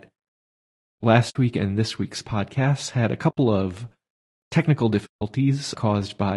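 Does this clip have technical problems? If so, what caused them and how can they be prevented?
Yes. The speech is rough and grainy throughout, with noise between harmonics and a thin top band, likely from low-delay AAC compression (AAC-ELD) at a low bitrate, consistent with about 32 kbps. Encoding at a higher bitrate prevents this.

AAC frame loss with muting leaves soft-edged silent gaps at 1.29 to 1.36 s (60 ms, just before "week and this week's"), 3.30 to 3.38 s (80 ms, just after "week's podcasts had a") and 5.06 to 5.22 s (160 ms), where the decoder zeroed lost frames. Packet-loss concealment or forward error correction prevents these holes.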